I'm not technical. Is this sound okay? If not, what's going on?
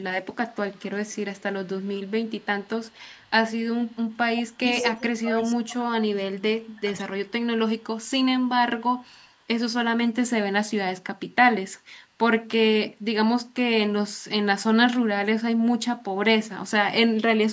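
No. Two call faults can be heard in this speech.

The first is echo leak. A delayed copy of the speech comes back about 0.12 seconds late. It is faint from 0.48 to 3.3 seconds. It is loud from 3.86 to 4.89 seconds. Short, very faint scraps return at 7.78 to 7.84 and 8.97 to 9.39 seconds. The likely cause is a loudspeaker on the other end. Its echo canceller missed part of what its microphone picked up and sent it back.

The second is speech suppressed in double talk. From 4.51 to 7.06 seconds, the speech dips and drops out in pieces. About two seconds in total are affected. At its worst, it goes nearly silent. This overlaps the loud echo. The likely cause is both sides talking at once. The echo canceller could not tell the talker from the echo, so it turned both down.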